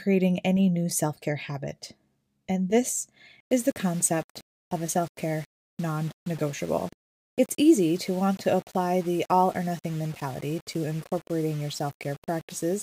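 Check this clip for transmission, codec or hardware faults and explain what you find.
One fault stands out. Low bit depth without dither runs from 3.40 s to the end at 12.83 s. The speech was likely rounded to very few levels without dither, which fits a 6-bit signal. The error follows the signal, so grainy, shifting distortion sits only around 25 dB below the speech, and quiet tails turn gritty or sputter.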